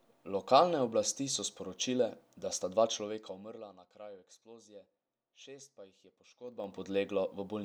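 From 6.4 to 6.8 s, just after "šest pa jih je", a level change of around 20 dB is applied in unsmoothed 2 dB steps, about thirty per second. Each jump clicks, laying a rapid ticking zipper noise over the speech while the level moves.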